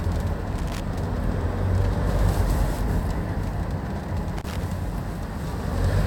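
At 0.53 s there's a quick burst of loose connector crackle lasting about 0.27 s, then another at 4.37 s for a similar stretch. A worn contact is flickering open and shut, chopping the audio into irregular scratchy crackles.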